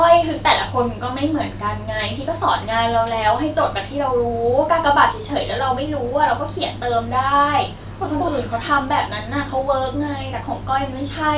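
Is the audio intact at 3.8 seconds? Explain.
Yes, the audio is intact at 3.8 seconds, with no dropout, click, distortion or other fault at that moment.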